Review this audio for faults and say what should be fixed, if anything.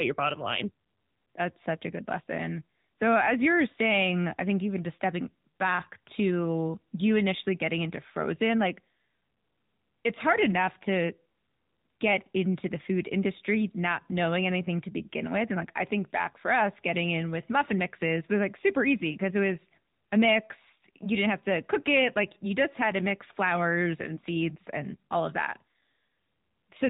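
The speech runs through an AMR narrowband mobile codec for its whole length. Nothing above 3.8 kHz survives, and the voice has a plainly audible buzzy, synthetic edge. The vocal-tract model, fed by only a few pulses every 5 ms, rebuilds the sound at a coarseness that suggests a mid-range mode near 10 kbps. A simple low-pass filter would dull the top end but leave the voice natural. To prevent this, record or route the audio over a wideband path rather than a 2G/3G call.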